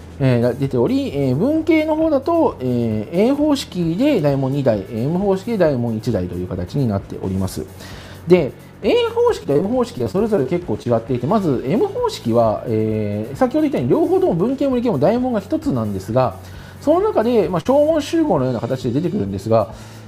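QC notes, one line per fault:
9.43 to 10.47 s: repeated packet loss (robotic sound). Over about one second the stream keeps dropping short chunks of audio, nine gaps in all, the longest about 21 ms, adding up to roughly 180 ms missing. Each hole is bridged by extending the sound just before it, so about 15 percent of this stretch is synthetic fill. Because the patches come in quick succession, the result is choppy with small pieces cut out.
10.83 s and 17.61 to 17.67 s: short concealed packet loss. Two isolated holes, about 20 ms and then about 40 ms, reached the decoder too late to play. The receiver covered each one by carrying the preceding sound forward and then crossfading back into the real signal. With so little missing, each is heard as a brief smear or wobble rather than a dropout.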